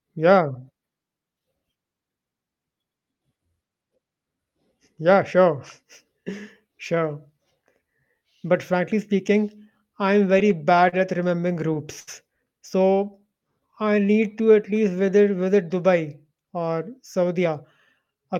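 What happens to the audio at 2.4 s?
Nothing goes wrong at 2.4 s; the speech carries on intact there, with no dropout, click or distortion at that point.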